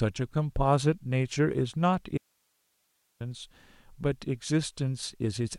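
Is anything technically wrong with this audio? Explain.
Yes. From 2.18 s to 3.20 s the speech drops out for about a second, leaving only hiss roughly 45 dB below the signal. This is an audio dropout to a faint residue, likely caused by the source signal being lost while the recording path after the break stayed live, so its own noise floor carried on. Unlike a natural pause or a fade, the cut and the return are abrupt, and the gap holds steady hiss rather than silence or room sound.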